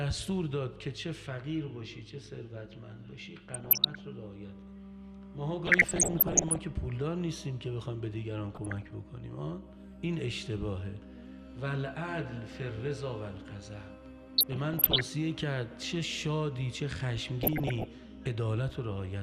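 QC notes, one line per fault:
3.52–4.00 s, 5.65–6.63 s, 8.55–8.90 s, 14.38–15.02 s and 17.43–17.85 s: DAB burbling. Each burst lays burbling over the sound. Weak reception let bit errors slip past the error correction into the MP2 data. Corrupted samples put short blips of noise in single sub-bands, and corrupted scale factors make sub-bands jump in level for up to a frame. That frame-by-frame flicker produces the burbling. The longest burst, near 6 s, is the densest and fits an error rate of around one percent.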